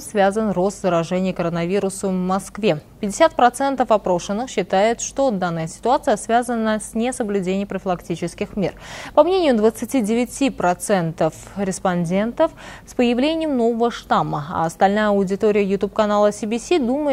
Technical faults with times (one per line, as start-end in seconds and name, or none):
none